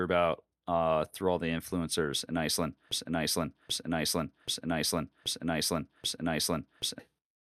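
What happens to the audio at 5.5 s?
At 5.5 s the speech is caught in a broken-record loop from 2.91 to 6.99 s. One 0.78 s fragment repeats exactly five times, likely because playback stalled and resent its last piece. A spectrogram shows identical blocks tiled back to back, and the intended speech is lost.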